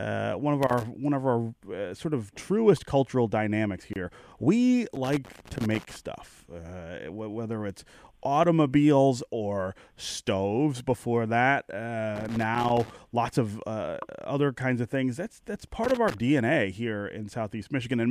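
A speech recording with loose connector crackle at 0.63–0.83, 4.95–5.96, 12.16–12.90 and 15.84–16.14 s, irregular scratchy bursts from a worn contact repeatedly making and breaking. A gap at a join of encoded pieces opens at 3.93–3.96 s, roughly 25 ms of silence left where separately encoded segments were butted together untrimmed.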